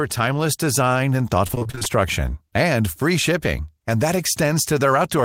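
From 1.47 to 1.87 s, repeated packet loss (robotic sound): many short holes, none longer than 25 ms, are patched by repeating prior sound, concealing half the span. Unlike one dropout, it's a rapid choppy stutter.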